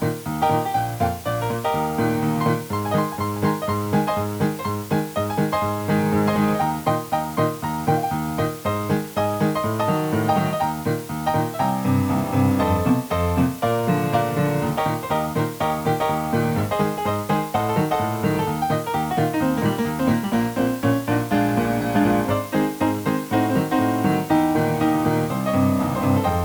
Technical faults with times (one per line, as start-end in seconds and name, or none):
0.00-26.45 low bit depth with dither